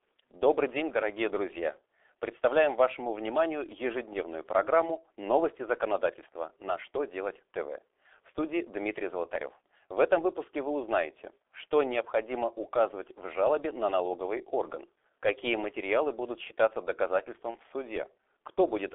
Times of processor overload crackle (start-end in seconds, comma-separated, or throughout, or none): none